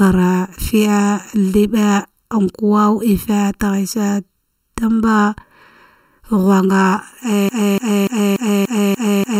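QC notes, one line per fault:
Throughout: channel delay (comb filtering). One channel runs late by under a millisecond, and the two are summed to mono. Shared content cancels at evenly spaced frequencies, starting near 700 Hz. The speech sounds hollow and phasey, with fixed spectral notches.
7.49 to 9.39 s: broken-record loop. A 0.29 s fragment repeats exactly, back to back, seven times until the clip ends. The stream likely stalled and kept resending its last held piece. The speech that should follow is lost.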